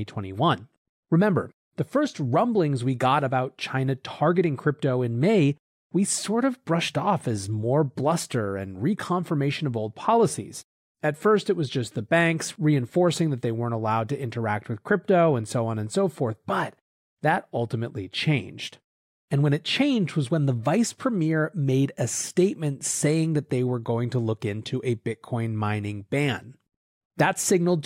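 No technical faults can be heard anywhere in the recording.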